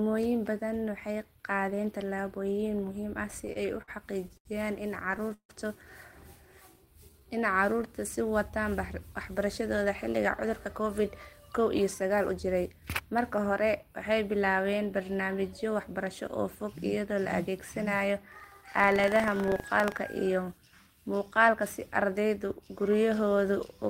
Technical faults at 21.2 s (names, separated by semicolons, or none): none